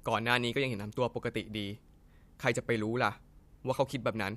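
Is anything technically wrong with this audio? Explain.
No, nothing technically wrong can be heard here.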